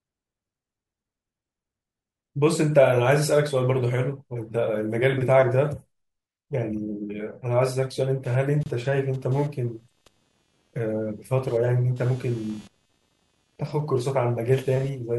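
At 8.25 s, computer activity noise enters and continues to the end of the recording. It is a buzzy, chirping texture pulsing at around 200 times per second, sitting roughly 30 dB below the speech. The buzz follows the machine's processing load rather than the talker, because current drawn by the processor, graphics hardware or peripherals shifts the ground reference that the audio circuitry shares, and that fluctuation rides on the signal.

At 8.63 s, while the buzz is already running, a gap at a join of encoded pieces cuts into the speech for about 27 ms, ending at 8.66 s. The sound drops out and resumes exactly where it left off, with edges blurred by the codec. This points to separately encoded segments spliced without trimming, so the encoder's start-up delay and the padded final frame of the earlier piece remain as a short dropout.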